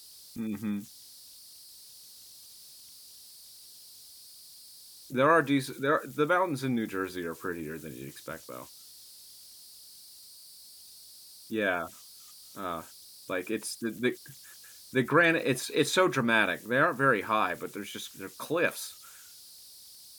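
Throughout, converter idle tones whistle around 5 kHz, about 24 dB below the speech, from an undithered delta-sigma converter; spectrograms show a thin horizontal line.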